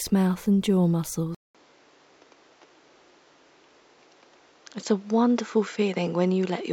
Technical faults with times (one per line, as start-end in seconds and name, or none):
1.35-6.73 input switched to a poorer device